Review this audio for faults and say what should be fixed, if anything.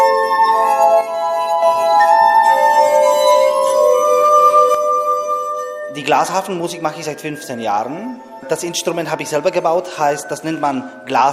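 The level falls abruptly by about 6 dB from 1.01 to 1.62 s and from 4.75 s to the end, likely because one channel drops out. The waveform envelope halves and the spectrogram dims evenly. Check stereo cables and connectors before summing to mono.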